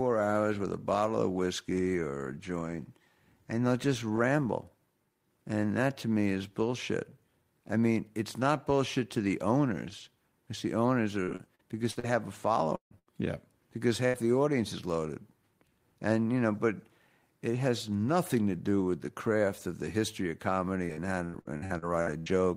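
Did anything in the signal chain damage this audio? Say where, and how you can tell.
Yes. Repeated packet loss (robotic sound) at the network stage affects 11.23 to 12.06 s, with five gaps up to 46 ms, and 20.86 to 22.29 s, with nine gaps up to 82 ms. Concealment fills roughly a quarter to a third of each span. Unlike a single burst, the holes keep recurring, so the speech turns choppy.

At 12.75 to 12.94 s the sound is stretched out for about 150 ms as a fading buzz or hiss that gives way to about 110 ms of silence before speech returns with a piece missing. This is likely a long network dropout. The silent tail sets it apart from a shorter burst, where the continued sound never fully dies away.

A burst of packet loss occurs at 12.99 s and again at 14.06 s. Each loses about 80 ms, and the receiver bridges it with a held, decaying copy of the preceding sound. Speech then resumes further on. 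Each is a single brief gap, not a recurring pattern.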